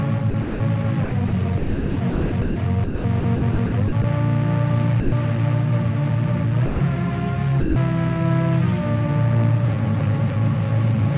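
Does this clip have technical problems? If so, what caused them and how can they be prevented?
Yes. There's sound chopped by the voice detector at 0.3–0.6, 1.04–1.32, 1.58–2.56 and 2.84–4.04 s, with bits swapped for comfort noise, most heavily around 1.6–2.6 s. The likely cause is the sender's voice detector toggling on and off. Loosening the detection threshold or adding a longer hangover would stop it cutting in mid-sound.

Sound dropped by the voice detector shows up at 5.0–5.12, 6.66–6.8 and 7.6–7.76 s, where short stretches give way to steady comfort noise. The likely cause is the detector mistaking quiet sound for background. Disabling discontinuous transmission or lowering the detector's sensitivity floor would prevent those gaps.

The narrow band topping out at 4 kHz comes from the G.711 call path.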